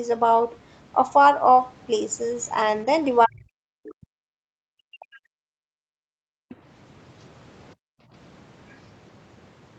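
From 3.25 to 5.82 s the speech dips and breaks up, around 40 dB down at its worst for roughly two seconds in total, the waveform showing ragged holes. This is likely speech suppressed in double talk, with the echo canceller cutting the talker while the far side spoke.

At 6.1–6.49 s the background is gated by the echo canceller, dropping about 38 dB into a near-empty gap on the spectrogram, and it happens again at 7.75–8.12 s with a drop of about 40 dB.

Brief scraps of a second voice follow at 6.49–6.56 s, some 25 dB under the speech, and at 8.69–8.76 s, some 35 dB under. They appear as faint, short smudges, likely the other side's voice leaking through past the canceller.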